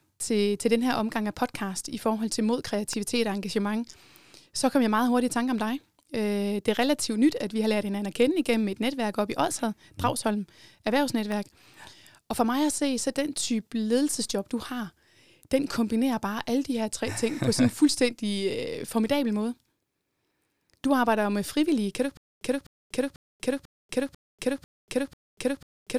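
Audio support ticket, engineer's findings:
Sharp snaps at 2.93 s (after "i forhold til mod", before "og engagement") and 11.32 s: electrical switching spike, likely a nearby switch or motor arc coupling into the audio line.

From 22.17 s to end, after "du ikke": same 254 ms burst repeats seven times every 494 ms, with 240 ms digital silence between. Stutter with silent gaps, likely a stalled stream replaying its last fragment, so the intended audio is lost.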